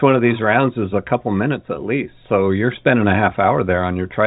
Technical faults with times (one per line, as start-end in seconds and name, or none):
none